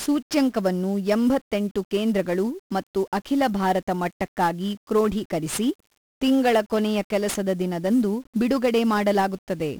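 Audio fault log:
throughout: 1-bit DFPWM compression, each sample nudging an adaptive level up or down, so the speech crackles and hisses, unlike steady background noise.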